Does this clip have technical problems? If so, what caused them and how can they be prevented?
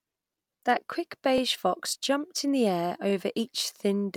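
Yes. At 1.38 to 1.40 s and again at 3.10 to 3.12 s, the playback device ran short of fresh audio and played its last buffer a second time, a repeated buffer. Each repeat lasts about 20 ms, which fits a 20 ms buffer. Because the piece is so short, it sounds like a click or brief buzz in the speech rather than an obvious stutter, with a hard join where the copy meets the real audio. Practically nothing is lost. Using a larger playback buffer or giving the audio thread higher scheduling priority would let new data arrive before the device needs it.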